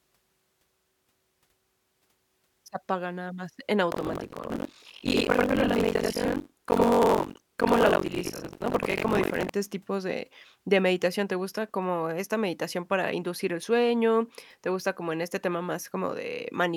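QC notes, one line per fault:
3.90–9.50 s buffer tearing: about 40% of each buffer replays speech about 100 ms old, giving a steady 46.9 Hz rattle, fitting 1024-sample buffers, that drops out in pauses.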